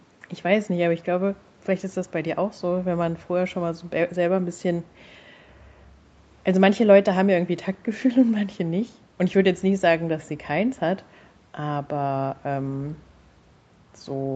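Listening through this speech recording, nothing stood out as a technical fault.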